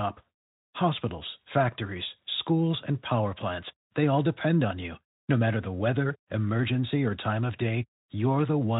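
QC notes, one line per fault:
No faults heard anywhere in this speech recording.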